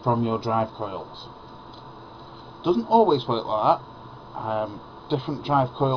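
No technical faults can be heard anywhere in the signal.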